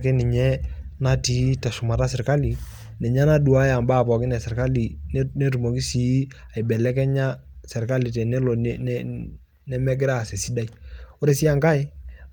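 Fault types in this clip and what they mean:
Nothing stood out on listening to this speech recording.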